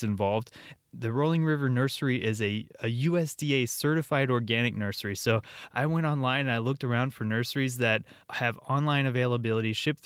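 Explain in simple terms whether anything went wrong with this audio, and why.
Nothing went wrong with the signal: the speech is carried steadily the whole way, with no audible dropouts, distortion or glitches anywhere in the recording.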